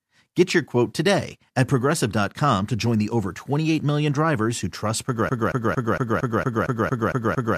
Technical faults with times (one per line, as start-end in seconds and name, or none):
5.29-7.57 broken-record loop